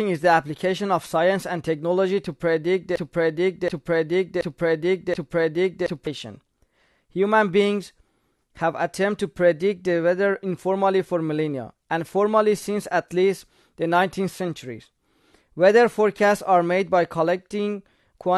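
From 2.96 s to 6.07 s the speech falls into a broken-record loop: one 0.73 s fragment repeats four times back to back, identical on every pass. A stalled player or stream likely kept resending its last held chunk, so the speech due in that span is lost.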